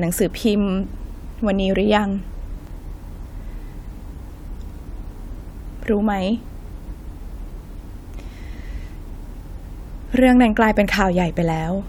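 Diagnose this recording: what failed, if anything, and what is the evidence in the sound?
The codec stage failed: compressed frames were skipped at 2.49–2.67 s, 6.85–6.95 s and 9.45–9.55 s. Each time the speech jumps forward by about a tenth of a second.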